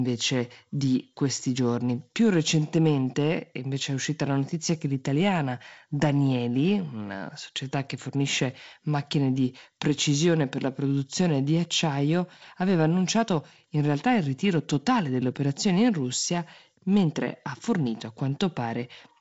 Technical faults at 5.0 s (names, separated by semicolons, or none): none